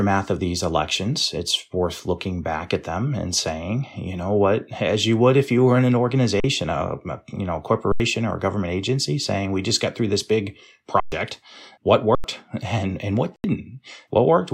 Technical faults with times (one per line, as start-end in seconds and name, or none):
6.40-6.44 underrun with held sample
7.92-8.00 underrun with held sample
11.00-11.12 underrun with held sample
12.15-12.24 underrun with held sample
13.36-13.44 underrun with held sample